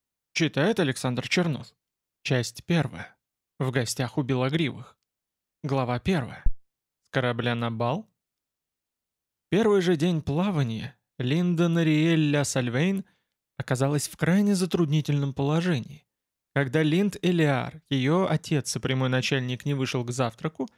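At 6.46 s there's a phantom power thump, a short, deep low-frequency knock that's over by about 6.51 s. It's what you hear when phantom power, or some other supply, gets switched on a live input and that sudden voltage step pushes straight through the coupling capacitors. It peaks at about -9 dBFS and dies away in roughly 12 ms, so it's a quick bump sitting under the sound rather than a long boom.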